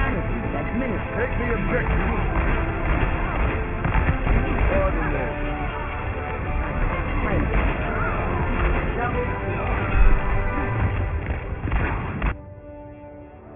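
Aliasing throughout: content above 3 kHz folds down as gritty, metallic tones, fitting an unfiltered resample to 6 kHz; spectrograms show mirrored traces stopping at 3 kHz.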